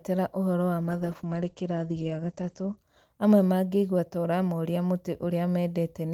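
Speech with a call bitrate drop from 0.82 s to 2.83 s. The audio turns coarse and muffled, and everything above 8 kHz disappears. That fits the encoder falling from around 40 kbps to about 12 kbps after the bandwidth estimate collapsed. Full 20 kHz bandwidth then returns.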